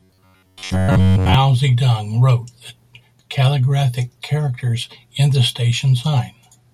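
Speech that, from 0.01 to 1.34 s, turns into a rigid, metallic buzz near 93.8 Hz. This is robotic sound from repeated short buffers, likely an 11 ms chunk looped while most incoming audio is skipped.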